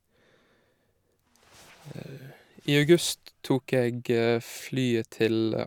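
No technical faults can be heard anywhere in the speech.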